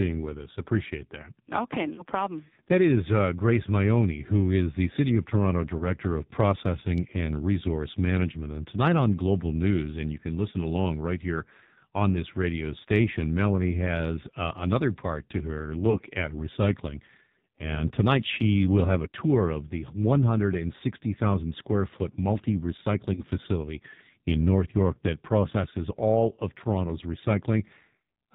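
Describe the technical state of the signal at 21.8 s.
At 21.8 s the speech carries AMR narrowband mobile codec damage throughout: nothing above 4 kHz on a spectrogram, with a buzzy, synthetic timbre that points to a low mode near 5.9 kbps.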